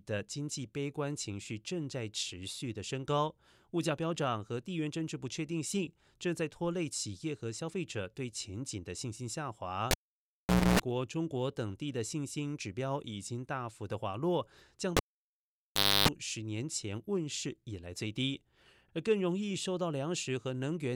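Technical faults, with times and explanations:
9.91–10.80 s and 14.97–16.08 s, cable pulled and plugged in: a pop cuts the speech to near silence for 0.84 s, then 1.07 s. As the plug's tip touches first, mains hum leaks in, 0.28 s at 60 Hz, then 0.30 s at 50 Hz. A second pop marks reconnection.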